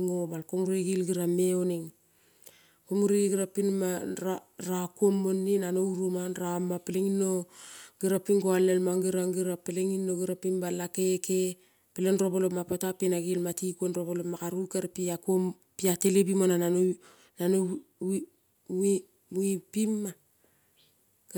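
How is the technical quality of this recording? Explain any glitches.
No technical faults are audible.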